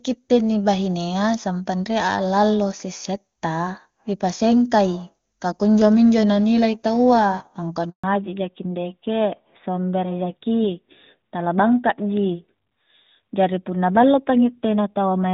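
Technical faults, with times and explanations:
7.90 to 8.04 s, handover gap: right after "nilai tau a angkua" the speech fades out within a few tens of milliseconds and stays silent for 140 ms. The call was moving between networks, no speech frames arrived during the switch, and that stretch of audio is lost.
8.04 s to the end, fallback to narrowband: nothing remains above 4 kHz, so the speech loses the crisp upper band the HD Voice link carried before the gap and turns duller and rougher. The call resumed on a narrowband codec, which fits AMR-NB at 12.2 kbit/s.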